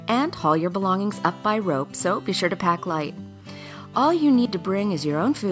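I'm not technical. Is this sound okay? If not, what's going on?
Yes, no faults here; it has been through a call's microphone processing, which trims the lowest bass, and that is normal.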